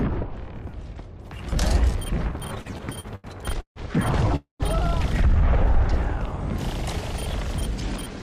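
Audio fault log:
2.47–3.79 s, repeated stalls (stutter): the sound halts eleven times, each halt filled by stretching the last sound, longest about 151 ms, 384 ms in all, nearly a third of the span. Packets kept arriving slowly, draining the jitter buffer repeatedly; nothing is lost, and unlike one single freeze the halts repeat.
4.36–4.63 s, call audio freeze: one stop of 238 ms, where the last sound carries on briefly as a fading buzz or hiss, then about 130 ms of silence before the audio resumes where it left off. Likely packets held up in transit emptied the jitter buffer once, not in a stuttering series.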